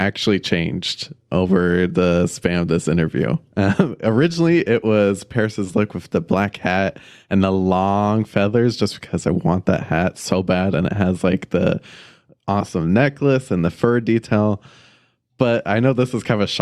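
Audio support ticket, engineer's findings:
No faults found in recording.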